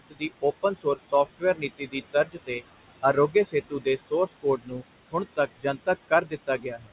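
Noise suppressor artifacts run through the whole clip. The suppressor estimates the steady room noise, which sits about 14 dB below the speech, and pulls the bands it classes as noise down by about 19 dB frame by frame. Between phrases the background drops away, then swells back under the speech. Nothing comes through above 4 kHz, which fits a narrowband G.711 A-law call path.

Speech cut by the noise suppressor occurs in five spans: 0.0 to 0.23 s, 0.63 to 2.62 s, 3.02 to 4.83 s, 5.36 to 5.88 s and 6.09 to 6.91 s. In each, the suppressor mistakes low-level speech for noise and attenuates it by up to about 21 dB (at most about 18 dB in the 5.36 s span). The affected portions total well under a second in the short spans and roughly half to three quarters of a second in the longer ones. Soft consonants and word endings there sound swallowed or faint.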